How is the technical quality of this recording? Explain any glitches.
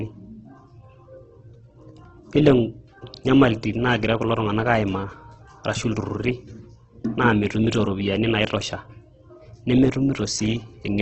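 The technical quality is poor, with heavy Opus compression damage throughout the speech. Nothing is present above 8.4 kHz, so the top end is cut off. The speech sounds rough and grainy rather than crisp. The likely cause is Opus encoding in its music mode at a very low bitrate, roughly 12 kbps. Short of bits, the encoder keeps each band's energy but fills detail with noise or copied lower bands. That substitution makes the grain.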